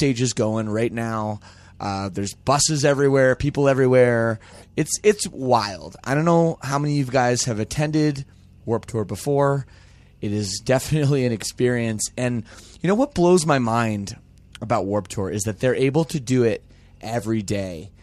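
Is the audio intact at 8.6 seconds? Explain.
Yes, at 8.6 seconds the speech plays through intact, with no dropout, click, distortion or other fault to be heard at that moment.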